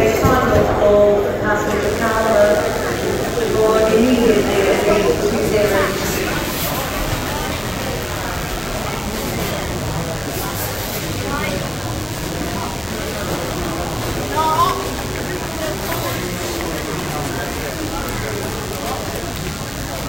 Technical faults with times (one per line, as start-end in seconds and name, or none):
1.83-20.09 DECT cordless phone buzz